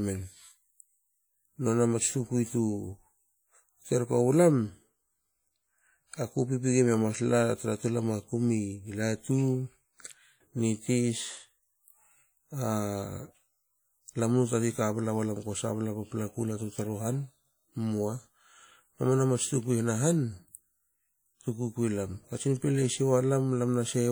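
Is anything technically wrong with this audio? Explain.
Yes. Throughout the speech there is a washy, ringing quality, with a hiss that swells and fades along with the voice and smears each syllable over tens of milliseconds. This is likely WMA compression: the transform coder spreads its quantisation noise across long blocks and drops weaker spectral detail, and the plainly audible damage fits a bitrate around 48 kbps. The band still extends to about 20.1 kHz, so the harm is smearing rather than dullness.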